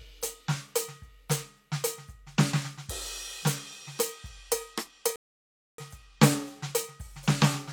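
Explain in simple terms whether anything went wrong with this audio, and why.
Something did go wrong here: the music drops out into silence at 5.16 s and picks up again at 5.78 s. That's a rebuffering stall. The player ran out of downloaded audio, so it had to wait for more to arrive before carrying on. When it resumes, it continues from exactly the spot where it stopped, so none of the music is missing. You just get an extra 0.62 s of dead air in the middle.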